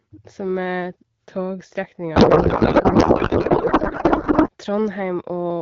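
A codec payload misread from 2.15 to 4.50 s: octet-aligned AMR frames decoded as bandwidth-efficient, so misplaced bits turn the speech into garbled, warbling noise.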